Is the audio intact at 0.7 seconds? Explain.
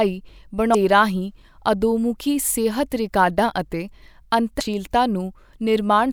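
No. Right at that point, from 0.71 to 0.75 s, the speech is broken by a brief chirp, squawk, click or short hole lasting about 40 ms. This is damaged data in a compressed stream: some of the encoded bytes there are corrupted, so the decoder misreads or discards those frames, loses synchronisation, and has to hunt for the next valid frame header before it can decode the speech correctly again.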